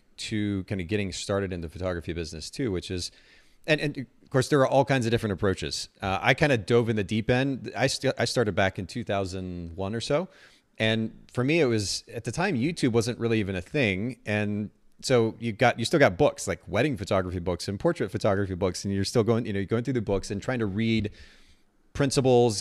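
A speech recording with no technical faults to be heard anywhere in it.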